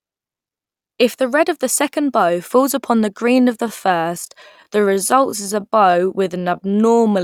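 From 3.30 s, right after "bow falls upon the", to the end, a time-stretched section slows the speech to 0.74 times its pace without changing pitch, likely from software repeating short pieces. It drags, and a spectrogram shows drawn-out harmonics.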